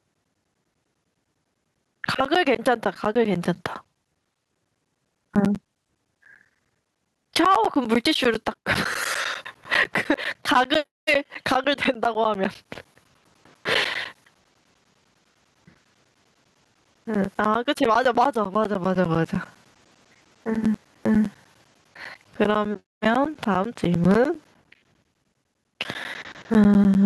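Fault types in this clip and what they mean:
Gain pumping: The level swing is large, around 20 dB. Loud and quiet passages sit unnaturally close in level, so the speech sounds squashed. The likely cause is a preamp gain set far too high, with a fast compressor or limiter clamping down on every peak and then releasing.
Periodic USB or driver dropouts: Short gaps of silence break into the audio at a steady rate of ten per second. They run from 0.14 s to 26.95 s, and each gap lasts about 10 ms. They are heard as a regular ticking or popping texture over the speech. This even spacing fits a background process that stalls the USB bus or audio driver on a fixed cycle, so a slice of audio is lost each time.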